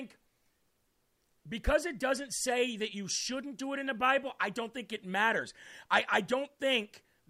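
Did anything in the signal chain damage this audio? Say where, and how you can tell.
No, nothing in the signal chain damaged this audio.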